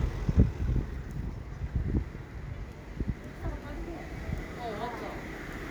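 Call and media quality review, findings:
No findings from the call and media quality review for this audio.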